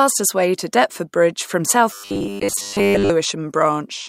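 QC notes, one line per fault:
1.91–3.12 s: robotic sound from repeated short buffers. The speech becomes a rigid, metallic buzz at 100 Hz. Most of this stretch is repeats. The likely cause is late audio, so one 10 ms slice loops while the real audio is skipped.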